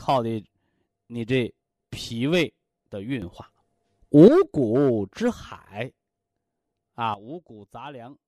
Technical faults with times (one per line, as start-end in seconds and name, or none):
3.22-4.28 sudden gain jump
7.14-8.28 sudden gain jump